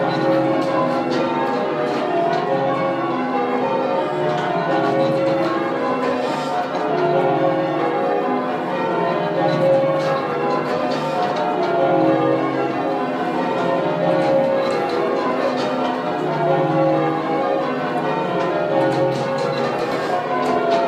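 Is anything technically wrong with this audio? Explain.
No, nothing technical stands out here, and the audio comes across without any fault worth pointing to.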